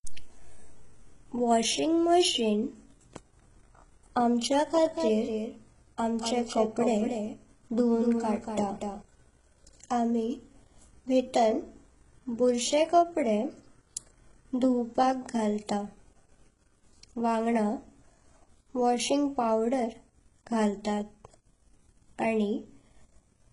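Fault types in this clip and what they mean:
HE-AAC compression: Throughout the speech, the treble is likely rebuilt by spectral band replication: lower bands are copied upward under a coarse envelope. Damage is heavy, nothing sounds above 11.1 kHz, and s sounds turn gritty and metallic, which fits a bitrate around 12 kbps.
doubled audio track: From 4.86 to 9.02 s, a second full-band copy of the speech trails roughly a fifth of a second behind, about 5 dB quieter, without decay or room colour. It starts and stops abruptly, likely from a slower capture path mixed back in.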